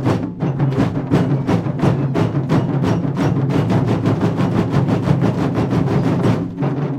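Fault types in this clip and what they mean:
No faults detected: the sound runs without dropouts, clicks, clipping, pitch shifts or level jumps.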